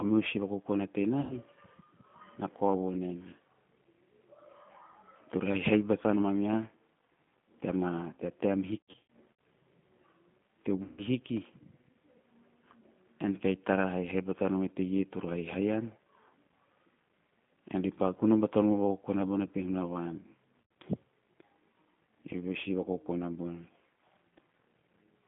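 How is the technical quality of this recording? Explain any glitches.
The quality is limited throughout by a narrow, coded telephone sound, with four short dropouts that are briefly filled in by the codec.

Across the whole recording the speech sounds thin, slightly rough and synthetic, confined to roughly 150 Hz to 3.5 kHz. This is plainly audible G.729 codec damage. The 8 kbit/s coder rebuilds each short frame from a vocal tract filter, a pitch predictor and a handful of pulses rather than the actual waveform.

The glitches are VoIP packet loss concealed by the speech codec. At 1.21 to 1.34 s, just after "meho si vakokona", the speech smears into a fading buzzy tone or coloured noise. It does so again at 8.79 to 9.03 s after "tea taem", where the gaps are scattered, and at 10.83 to 11.01 s and 20.62 to 20.71 s. Missing audio, from 90 ms up to 270 ms per event, was filled by extrapolating the last pitch and filter with falling gain.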